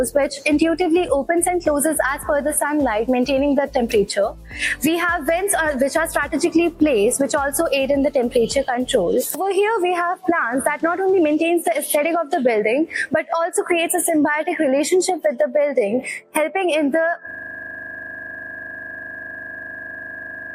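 From 17.31 s, a system hang loop: playback froze, cycling one 40 ms chunk to the end as a 25 Hz buzz, with identical tiled waveform cycles.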